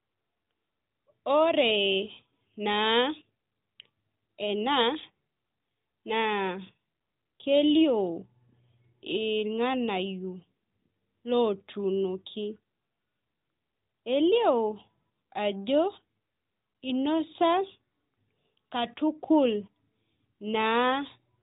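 Listening to the clip, nothing stood out as a technical fault.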